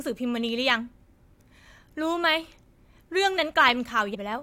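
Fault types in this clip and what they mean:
Periodic USB or driver dropouts: From 3.36 s to 4.33 s, a tiny slice of audio, a fraction of a millisecond, goes missing every 0.125 s. That is about ten evenly spaced ticks, as if a background task stalled the audio path on a fixed timer. Nothing fills the gaps; the samples are simply skipped. What sets this apart from a frame skip is the steady, clock-like rhythm of small, sharp ticks with no noticeable loss of content.
Compressed frames skipped: At 4.14 s to 4.16 s the speech jumps forward by about 150 ms. That is roughly seven frames of 23.2 ms that the decoder never played, either because they were missing or because they were rejected as damaged. Unlike the regular ticks around it, this is a single event, and an audible chunk of sound is lost.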